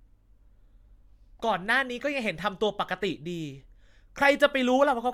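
Speech recording with no technical faults audible anywhere in the clip.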